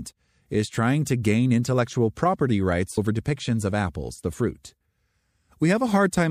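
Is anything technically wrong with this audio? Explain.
Yes, there's one glitch. From about 2.94 to 2.98 s the speech breaks into a short glitch lasting around 40 ms, the classic sign of damaged data in a compressed stream. A stretch of the encoded bytes was corrupted, so the decoder couldn't make sense of those frames. It lost sync and had to hunt for the next valid frame header before it could carry on, and that scramble is what you hear.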